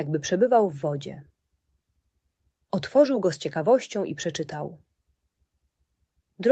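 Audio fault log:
No faults can be heard in this clip. The sound has passed through a call path, with nothing above 8 kHz and the usual coding texture of a call codec, which fits Opus at around 32 kbps.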